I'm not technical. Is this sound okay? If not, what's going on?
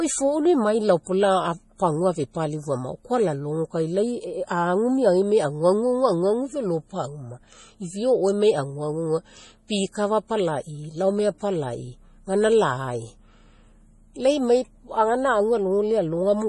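No. From start to finish the speech carries damage that is likely from MP3 compression squeezed very hard. The format keeps only the parts of the sound it judges most noticeable, and here it cuts away everything above about 11.4 kHz, so the voice sounds dull and muffled. Quieter details flicker in and out from moment to moment, giving a watery, swirling quality, and s sounds turn metallic or chirpy.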